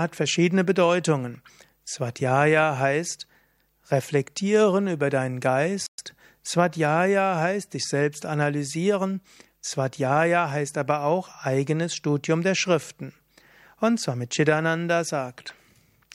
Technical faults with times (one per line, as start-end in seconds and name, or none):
5.86-5.98 playback stall